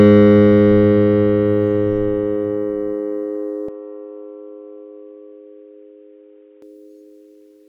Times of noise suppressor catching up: none

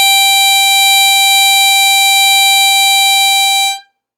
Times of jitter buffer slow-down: none

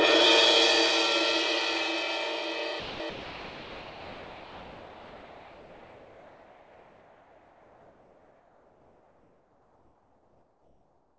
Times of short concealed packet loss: none

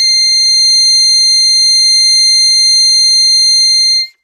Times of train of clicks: none

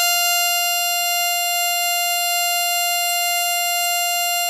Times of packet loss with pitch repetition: none

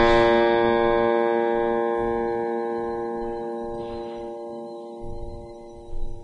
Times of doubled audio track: none

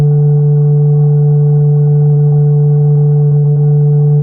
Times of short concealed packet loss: 2.13-2.33

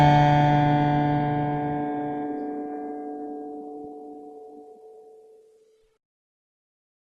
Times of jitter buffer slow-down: none

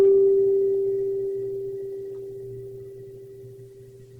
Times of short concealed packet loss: none

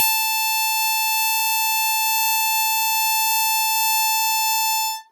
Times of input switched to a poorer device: none

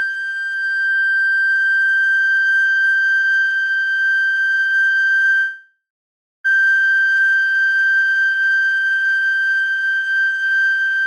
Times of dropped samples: none

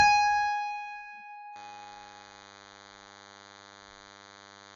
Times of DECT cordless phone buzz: 1.55-4.76

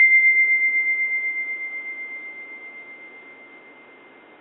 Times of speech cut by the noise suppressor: none

